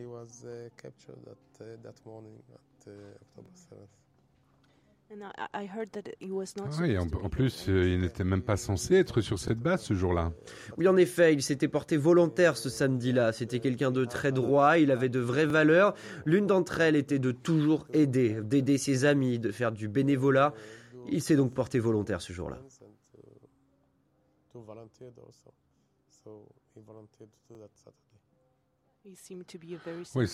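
Overlapping chunks cause a brief stutter at 3.46–3.48, 9.48–9.50, 15.50–15.53, 21.53–21.55 and 27.55–27.57 s. Each 6 s chunk starts 23.22 ms early, replaying that slice. A waveform shows a duplicated segment with a step at the join, and a spectrogram shows a thin vertical click line.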